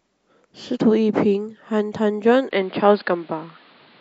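A speech recording whose sound changes abruptly at 2.51 s. From there to the end it turns duller and boxier, with nothing above 5 kHz, and a new, faint background noise sits roughly 35 dB below the speech. There is no gap at the change and the level stays about the same. The likely cause is an input switched to a poorer device partway through, such as another microphone or a headset's call profile, whose narrower band and own noise floor take over.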